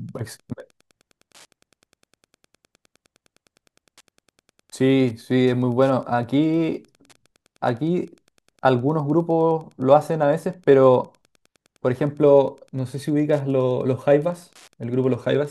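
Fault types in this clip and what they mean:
Wi-Fi interference: a nearby Wi-Fi radio's signal is picked up and rectified by the audio circuitry, so its beacon becomes audible as a faint, steady tick every 102.4 ms, close to ten per second, running underneath the speech for the whole clip at roughly 40 dB below it. The tick rate sets it apart from GSM buzz, whose pulses come much faster and merge into a harsh buzz rather than separate ticks.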